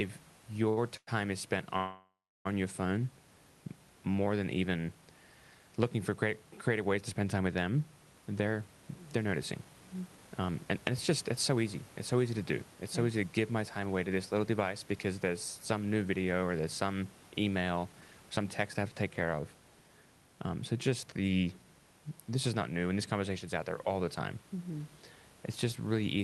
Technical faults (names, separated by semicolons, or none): short stall from a late packet; call audio freeze; jitter buffer speed-up